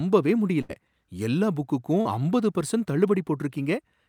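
A speech recording with two network dropouts in it. The first is a burst of packet loss from about 0.61 to 0.71 s: roughly 80 ms of audio never arrived, and the receiver papered over about 76 ms of it by stretching the last bit of sound it had and fading it down. You hear that as a held, dying tail, and then the speech picks up again further along with that stretch simply gone. The second is a short concealed packet loss around 2.01 to 2.07 s, much smaller at about 40 ms missing with 39 ms filled in. Here the decoder carried the previous sound forward for a few hundredths of a second, pitched or noise-like depending on what came before, then blended back into the real signal. It comes across as a brief smear in the speech rather than an obvious gap.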